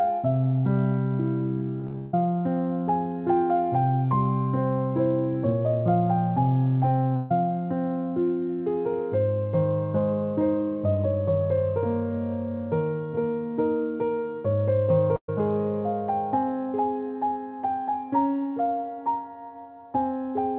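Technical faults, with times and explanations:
1.8 to 2.14 s, repeated packet loss (robotic sound): the stream kept losing or receiving packets too late across this third of a second, with the longest hole lasting 146 ms. Each hole was bridged by extending the preceding sound, and about 65% of the stretch is that patching, around 0.23 s of real audio gone. The result is a choppy, robotic texture with pieces dropped out. The call path's narrow band, nothing above 4 kHz, which fits the G.711 mu-law codec, sits under it all.
7.16 s and 15.16 s, burst of packet loss: in each case a run of consecutive packets failed to arrive in time to be played, removing about 140 ms at 7.16 s and 120 ms at 15.16 s. The receiver covered each hole by stretching the last sound and fading it, heard as a brief held buzz or a hiss that dies away. At 15.16 s the fill dies out into about 70 ms of silence before playback resumes past the lost section.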